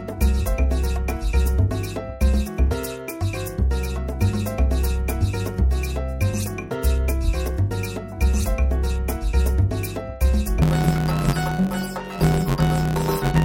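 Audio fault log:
10.62–13.44 s: planar audio read as interleaved; each 10.88 ms left-then-right block is read as alternating pairs, causing a robotic 91.9 Hz buzz rather than an octave shift.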